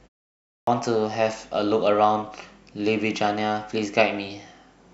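Clipped start after a pause at 0.54 to 0.67 s in this speech clip: after roughly half a second of silence at the very beginning, the output path appears to have gone idle and had to wake and lock again before it could play. The first 133 ms of speech is swallowed during that recovery, so the opening sound breaks in abruptly out of silence with its first sounds missing.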